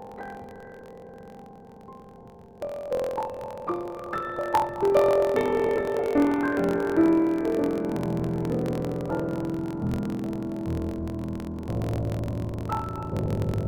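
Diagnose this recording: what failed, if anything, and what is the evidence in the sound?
A block size mismatch, truncated, at the driver or buffer stage. A steady buzz at 43.1 Hz runs through the whole clip. The audio plays 1.12 times fast at about normal pitch. Each block's tail is dropped, which fits a 1024-sample read.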